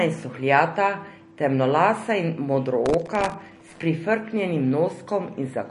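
Speech with plainly audible codec damage throughout: nothing is present above 10.6 kHz, and the sound has a watery, swirling texture with smeared consonant attacks. This is likely MP3 compression at a low bitrate in the region of 40 kbps, where the encoder cuts the treble and drops weak frequency lines from frame to frame. From 2.86 to 3.83 s, right after "in suhljata temnolasa in", processor overload crackle adds a gritty tearing. Dozens of very short buffers, each under a millisecond, miss their deadline in a row, and each gap is filled with stale audio with hard edges.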